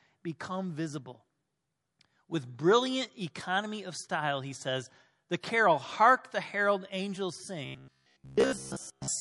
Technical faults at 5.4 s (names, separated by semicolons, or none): MP3 compression; pre-echo